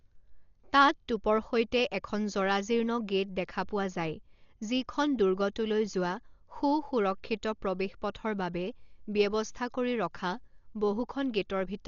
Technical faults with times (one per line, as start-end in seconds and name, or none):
0.00-11.88 Dolby Digital compression